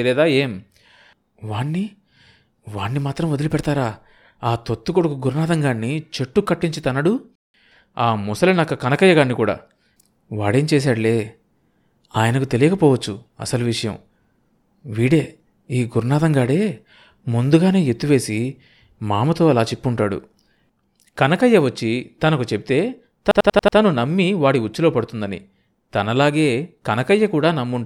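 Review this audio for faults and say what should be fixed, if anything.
A system hang loop runs from 23.31 to 23.78 s. A 92.9 ms slice repeats five times at 10.8 Hz, a machine-gun stutter that fits a 4096-sample ring buffer replaying during a freeze.

To prevent it, give the audio thread real-time priority and fix the driver stall so the buffer keeps being refilled.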